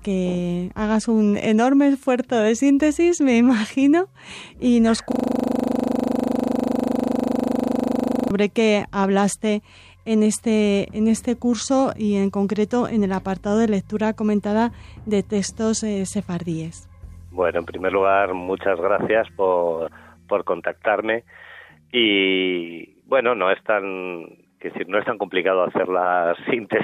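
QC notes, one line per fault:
5.12–8.31 s, system hang loop: the sound abruptly locks into a hard, rattling buzz at 25 Hz, the same 40 ms fragment repeating exactly, about eighty times, for just over three seconds before normal audio resumes. The machine or its audio driver stalled while the sound hardware kept replaying the last contents of its ring buffer, which fits a buffer holding about 40 ms of audio. That short cycle sets the buzz's pitch.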